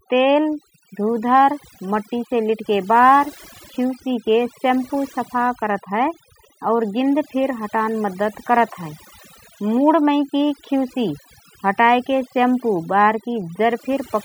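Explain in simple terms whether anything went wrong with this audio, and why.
Something did go wrong. The speech suffers from overdone noise removal, across all of it. A cleanup tool was set too strong. It cut away the background noise, and soft parts of the voice went too. The gaps sound oddly silent, with twinkling specks.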